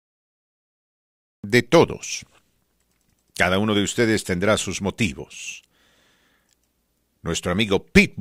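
The clip is speech with a cut-off start. It is digital silence from 0 to 1.44 s. At 1.44 s the speech enters abruptly, mid-sound, with no natural attack or fade-in. The recording or stream began late, so the opening was lost.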